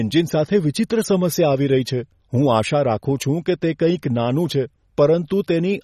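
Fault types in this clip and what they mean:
MP3 compression: Throughout the speech, the audio sounds watery and swirling, and nothing is present above 13 kHz. The likely cause is a heavily squeezed MP3 encode, consistent with roughly 32 kbps. With so few bits, the encoder cuts the treble at a fixed point and drops quieter frequency components, which then flicker in and out from one frame to the next. That flickering produces the plainly audible burbling texture and softened consonant edges.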